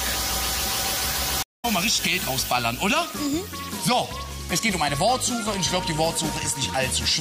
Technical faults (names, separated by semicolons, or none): stream reconnect